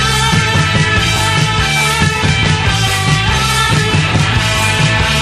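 No technical faults can be heard anywhere in this audio.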